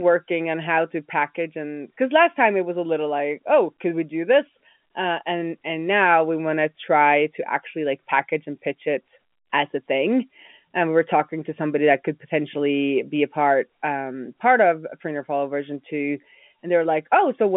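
No technical faults are audible.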